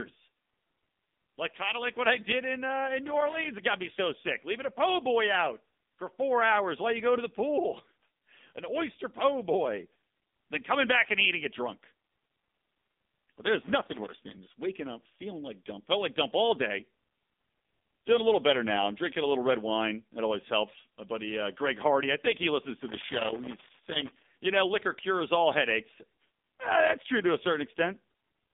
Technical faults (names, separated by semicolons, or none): AMR narrowband mobile codec; dropped samples